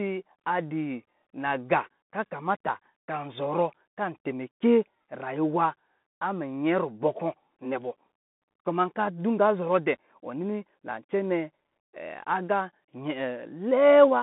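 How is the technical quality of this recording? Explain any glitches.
The recording has clearly audible codec damage throughout. Bluetooth CVSD headset codec: the speech sounds boxed-in and thin, with nothing above 3.8 kHz, a band of roughly 150 Hz to 3.7 kHz, scratchy s sounds and a granular hiss underneath. Each sample is reduced to one up-or-down bit with an adapting step, which fits a 64 kbps stream.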